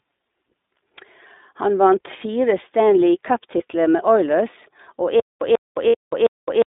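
Throughout, the speech is confined to roughly 250 Hz to 3.7 kHz, with a slightly rough, synthetic edge and plainly audible coding damage. This points to the iLBC codec, likely in its 15.2 kbps mode with 20 ms frames. Each frame's excitation is coded independently, and everything above the narrowband limit is discarded.

From 3.58 to 3.62 s, the speech briefly turns into a short, faintly buzzy held vowel. This is a single lost iLBC frame, about 20 ms of audio. The decoder fills the gap by repeating the last pitch cycle mixed with noise. Because iLBC frames stand alone, the speech recovers immediately afterwards.

From 5.20 s to the end, a 140 ms burst repeats every 356 ms, four times, each followed by about 216 ms of dead digital silence. This stutter with silent gaps likely comes from a stalled stream: at each retry the player replays its last fragment and then runs dry, and the speech that should have filled that time is lost.

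Within that stutter, from 5.88 to 5.95 s, a longer buzzy, breathy hold fades as it goes. This is about 60 ms of lost iLBC frames, concealed by the same pitch-repeat-and-noise fill.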